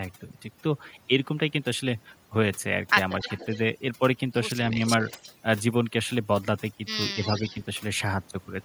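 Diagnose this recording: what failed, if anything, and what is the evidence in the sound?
Overdone noise removal in call processing runs throughout: near-silent background with twinkling specks. A spectrogram shows isolated dots and hollowed-out bands.

An echo leak, likely residual loudspeaker echo the canceller missed, puts a copy about 0.27 s late at 3.2–3.58, 5.06–5.34 and 7.23–7.56 s, roughly 20, 25 and 10 dB down, visible as a shifted repeat.

Speech suppressed in double talk at 7.14–7.55 s: the level sags a few dB over roughly 0.3 s, likely echo-canceller ducking, visible as a shrunken waveform envelope.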